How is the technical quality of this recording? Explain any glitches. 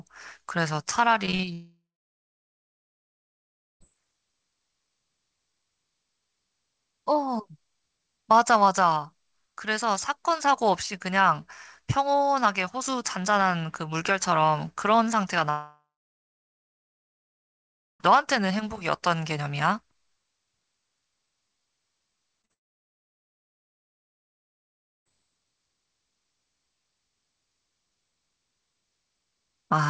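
The recording has clear network faults. There are three long gaps, one choppy stretch and two brief smears. Above them, the audio stops at 8 kHz, which fits a G.722 call codec.

From 1.26 to 1.49 s there is repeated packet loss, heard as robotic sound. Four holes open in quick succession, the longest 39 ms. About 39% of that stretch is patched. Each time, the receiver extends the last sound to cover the hole. The real audio returns briefly, then the next hole comes. The result is choppy, with pieces missing.

Three long network dropouts follow, at 1.53 to 3.82 s, 15.50 to 18.02 s, and 22.53 to 25.07 s. The likely cause is audio that stopped arriving for over two seconds each time. The receiver stretches the final sound into a fading buzz or hiss. About 2.0 s, 2.2 s and 2.5 s of silence remain. The sound then resumes further on, and the missing part never returns.

Short concealed packet loss appears twice, from 22.42 to 22.45 s and from 22.45 to 22.51 s. 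These are 20 ms and 40 ms holes, right before the third dropout. The decoder fills each one by continuing the previous sound's pitch or noise, then blends back. You hear a quick smear or wobble. A brief sound inside it can vanish.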